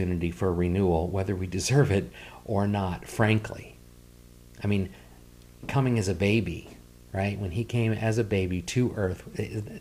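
Speech runs with video or display buzz throughout, a steady buzz at the 60 Hz picture field rate with hash above it, roughly 25 dB below the speech. A screen or video cable near the audio path is coupling its scan energy into the signal.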